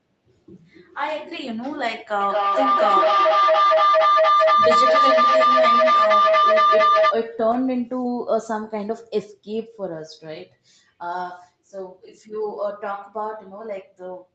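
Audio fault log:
2.2–7.17 s feedback howl. A tone near 1 kHz builds to about 7 dB above the speech. It repeats roughly every 200 ms as the room loop keeps gaining.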